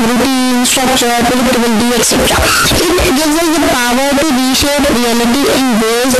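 Signed and unsigned mixed up throughout: very loud, harsh distortion, with quiet passages as loud as the rest. It's likely 16-bit samples read with the wrong sign convention, turning zero crossings into full-range jumps.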